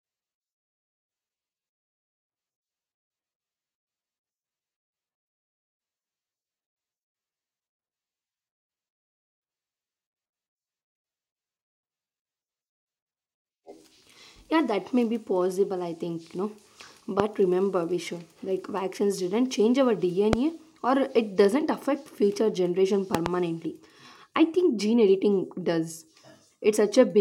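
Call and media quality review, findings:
Loud pop at 17.20–17.22 s, after "vaccines didn't change our" at 20.33–20.35 s, and a double pop after "doesn't affect future generation" at 23.15–23.28 s. Each is roughly 20 dB above the speech, which continues underneath. A voltage transient from a connector, switch or static discharge is the likely source.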